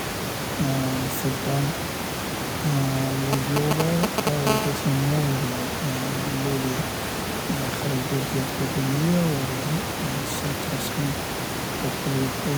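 From 3.33 to 4.29 s, GSM signalling bursts break into the speech. A 2G phone close by is sending short groups of radio bursts, the pattern that fits signalling before a call or message. The audio circuit rectifies those pulses. The result is a galloping dit-dit-dit of brief buzzes at about 217 Hz. These bursts sit somewhat louder than the speech itself.

At 4.47 s a continuous GSM phone buzz takes over and runs to 7.70 s, ending just before "خلک ډیر زیات". The phone now transmits steadily at 217 bursts per second, as it would during a call. Each pulse is rectified into the audio path. It sounds like a hard, raspy 217 Hz buzz with many harmonics, unrelated to the speech. It sits about 9 dB below the speech, with a room noise floor roughly 7 dB under the speech.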